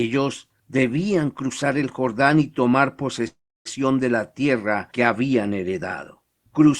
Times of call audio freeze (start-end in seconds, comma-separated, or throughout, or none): 3.27-3.67